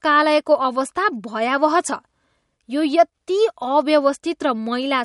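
Throughout the speech, content stops sharply above 11.2 kHz and weak spectral detail flickers in and out, giving a watery, swirly texture with smeared consonant attacks. This is likely MP3 compression, and the damage is plainly audible, which fits a low bitrate around 48 kbps.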